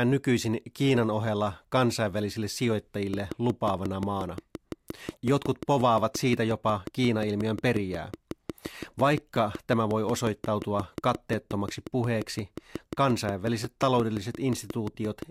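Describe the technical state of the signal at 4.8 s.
At 4.8 s the speech is overlaid by a train of clicks running from 3.14 s to 15.23 s. Regular pulses arrive at 5.63 per second, peaking about 5 dB above the signal. They are audible as steady ticking, including in pauses. The likely cause is interference from nearby equipment or a faulty connection or power supply.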